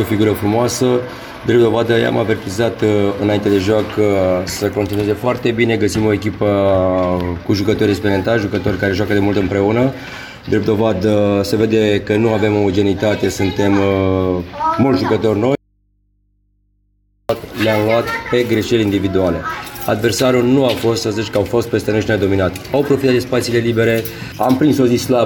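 At 15.55 s the sound cuts out abruptly and returns at 17.29 s, an audio dropout to a faint residue lasting about 1.74 s. Only mains hum remains, roughly 45 dB down, likely from a live but open input. The hard edges set it apart from a pause or fade.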